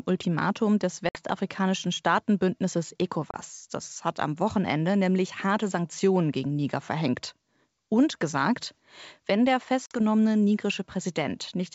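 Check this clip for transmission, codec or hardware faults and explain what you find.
Yes, one transmission fault recurs three times. Packet loss on an ADPCM call at 1.09, 3.31 and 9.86 s (after "gesagt wenn der"): 60, 30 and 50 ms of audio are lost as silent holes. Each loss throws the decoder's predictor and step size out of step with the sender's, so the speech returns briefly distorted before settling.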